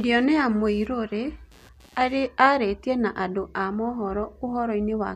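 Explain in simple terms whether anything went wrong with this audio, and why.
Something did go wrong at the start: from 0 to about 2.27 s there's computer activity noise, a faint buzzy chatter pulsing around 150 times a second under the speech. The computer's busy parts disturb the audio circuit's shared ground, so the buzz follows the machine, not the talking.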